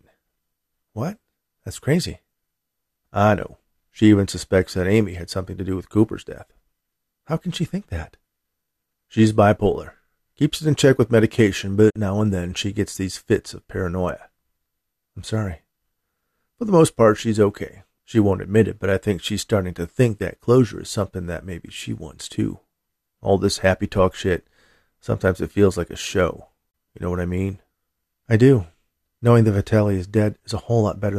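A digital broadcast dropout: the receiver lost frames and muted, fading out in about 8 ms. The speech vanishes at 11.90 to 11.96 s, after "in check with medication", and at 26.71 to 26.75 s, after "feels like a show".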